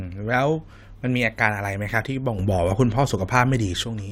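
At 2.39 s the speech and the background noise both step up by about 6 dB in one go, then drop back at 3.84 s. That's a sudden gain jump, likely a digital gain change applied instantly with no ramp.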